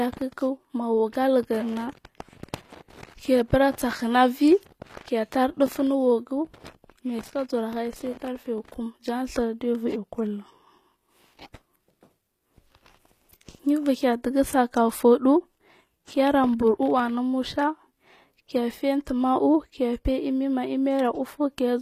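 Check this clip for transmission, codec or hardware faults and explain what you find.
One codec fault runs through the whole speech clip. It sounds like HE-AAC compression, likely at a low bitrate near 24 kbps. The treble is rebuilt by copying lower bands upward, so s sounds turn gritty and metallic. Nothing remains above 14.9 kHz.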